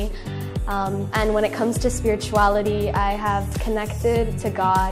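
No technical faults can be heard anywhere in the audio.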